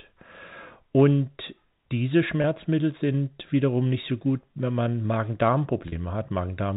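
At 2.42–2.44 s, just before "sind wiederum nicht so", and at 5.88–5.92 s, packet loss with pitch repetition fills 20 ms and 40 ms gaps by replaying the last pitch period. Each gap comes out as a brief held buzz rather than a silent dropout or click.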